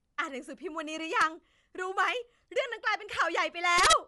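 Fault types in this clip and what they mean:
Bluetooth LC3 compression: A transform codec working in 10 ms frames at what sounds like about 48 kbps likely squeezed this speech, discarding upper-band detail and leaving a breathy, grainy edge, with nothing heard above 11.6 kHz and the codec damage plainly audible throughout.
Integer overflow: Loud samples ran past the integer limit and wrapped to the opposite sign instead of being held at the ceiling, so peaks flip across the full range. A brief crack sounds at 1.22 s, and a harsher burst of cracks runs from 3.78 to 3.93 s.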